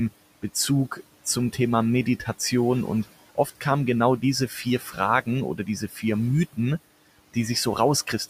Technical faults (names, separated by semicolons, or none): noise suppressor artifacts; speech cut by the noise suppressor